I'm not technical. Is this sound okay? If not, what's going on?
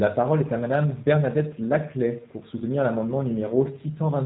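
No. Throughout, the speech sounds slightly rough, buzzy and synthetic, and it lacks crispness. That is the G.729 codec, a phone-call compression method that rebuilds the speech from a simplified model of the voice and drops all the high, airy detail.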